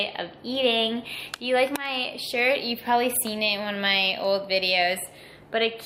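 Dropped samples, at 0.55 s and again at 4.25 s: each is a single sharp click that shows as a thin vertical line across the spectrum. The likely cause is a handful of samples, well under a millisecond's worth, going missing from the stream. The waveform then jumps straight from one value to a later one instead of moving smoothly. The gap is far too brief to remove any audible sound, so only the abrupt step is heard.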